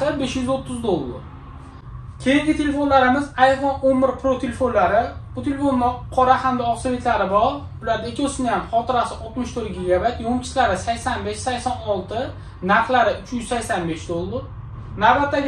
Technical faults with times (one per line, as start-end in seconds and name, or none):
14.27-15.48 channel delay (comb filtering)